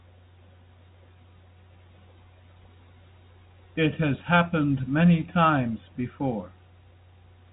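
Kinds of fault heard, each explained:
No kinds of fault are heard in this speech.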